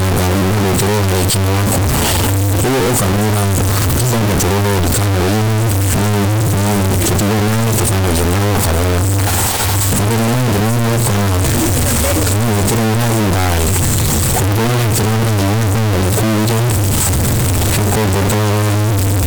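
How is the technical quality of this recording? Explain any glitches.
The quality is very poor. Float read as integer runs through the whole speech clip. The sound is extremely loud, harsh and nearly square, sitting at an almost fixed, high level. Background noise is as loud as the speech. Pitch can still be followed. This likely comes from 32-bit float samples being read as 32-bit integers, so sign and exponent bits set the level.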